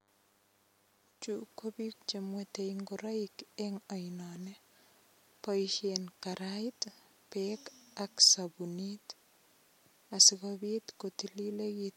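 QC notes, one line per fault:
0.0–8.38 s, DECT cordless phone buzz: a thin, steady buzz sits under the speech from the very start and cuts out at about 8.38 s. It's pitched at 100 Hz with a stack of harmonics above it, because a nearby DECT handset or base is firing a short radio burst every 10 ms and something in the audio chain is rectifying those bursts into sound. It's quiet, roughly 40 dB below the speech.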